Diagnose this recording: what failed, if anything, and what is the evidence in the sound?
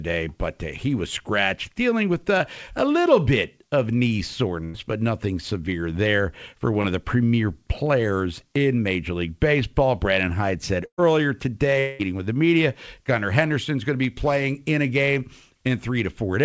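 Short concealed packet loss, network stage, occurs at 2.38 to 2.42 s and 6.82 to 6.86 s. Each is a brief smear of about 20 ms. About 20 ms of the audio never arrived, and the receiver bridged it by extending the preceding sound before blending back into the real signal. The speech skips ahead only about 20 ms, which separates these events from the longer bursts. The band limit at 8 kHz comes from the G.722 path at 64 kbps.

Burst of packet loss, network stage, occurs at 4.64 to 4.76 s and 10.86 to 11.00 s. At 4.64 s the receiver filled about 100 ms by continuing the last sound, which tapers as the fill goes on, and the speech resumes about 100 ms further along. At 10.86 s the filled stretch is about 120 ms, and the fill fades into about 80 ms of silence before the speech picks up about 120 ms later. These gaps are longer than the short losses, and the audible skip in the speech tells them apart.

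At 11.80 to 12.01 s a continued sound fills about 0.19 s with no silence, and the speech comes back about 0.2 s further on. This points to a long network dropout as the likely cause. It is the longest gap in the clip, and its length distinguishes it from the bursts, although the concealment never reaches silence. The stretch between the last sound before the gap and the return of the speech was never played.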